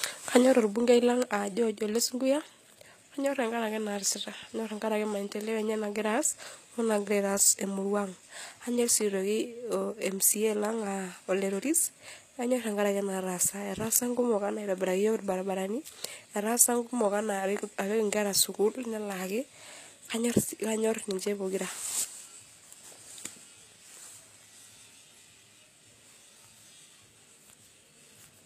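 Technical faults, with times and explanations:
Throughout, HE-AAC compression: the treble sounds pasted on and the s sounds come out gritty and lispy, likely from band replication at a low bitrate around 24 kbps.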